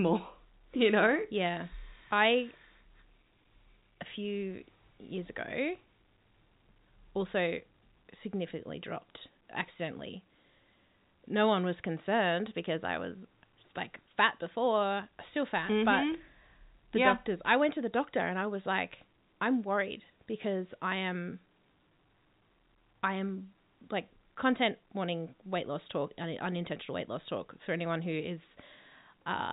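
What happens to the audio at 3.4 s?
Nothing goes wrong at 3.4 s: the speech carries on intact through G.711 telephone coding, with the usual narrowband sound that has nothing above about 3.8 kHz.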